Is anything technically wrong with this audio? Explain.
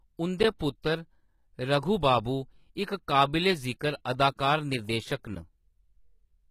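Yes. The clip carries compression damage throughout and two brief pre-echoes.

HE-AAC compression: Across the whole clip the treble sounds rebuilt, not captured. The likely cause is HE-AAC at a low bitrate, which fits something around 20 kbps. Only the lower spectrum is coded, and the top is synthesised by copying lower bands upward under a coarse envelope, so its harmonics fail to line up with those below. The damage is plainly audible, with s sounds turning gritty or lispy, and nothing is present above 14.9 kHz.

Pre-echo: This occurs at 0.59 s and again from 4.36 to 4.39 s. In each case a sharp onset fell late in a transform block, and the quantisation noise sized for that loud moment was spread across the whole block, including the quiet stretch before the attack. A short burst of hiss therefore arrives ahead of the onset, lasting about 17 ms the first time and 25 ms the second, and the attack sounds softened or smeared.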